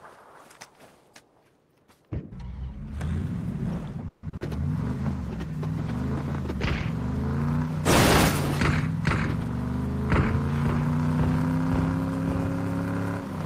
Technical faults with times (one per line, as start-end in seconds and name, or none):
4.08-4.25 call audio freeze
4.29-4.43 short concealed packet loss
4.99-8.27 call bitrate drop